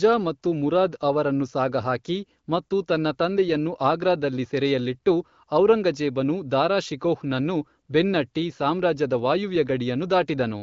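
Nothing stood out on listening to this speech, which comes through the AMR wideband (HD Voice) codec with its top end ending a little above 7 kHz.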